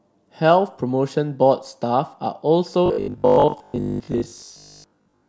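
From 2.86 to 5.28 s the speech turns into robotic sound from repeated short buffers, a rigid 50 Hz metallic buzz, likely from a repeating 20 ms buffer replacing most of the audio.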